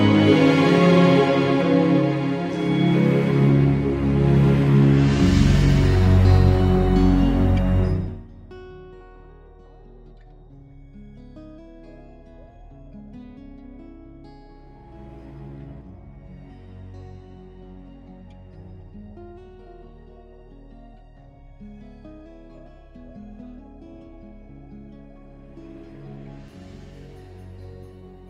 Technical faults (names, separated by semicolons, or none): zipper noise